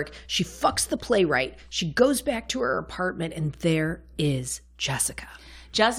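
A speech recording with nothing technically wrong with it.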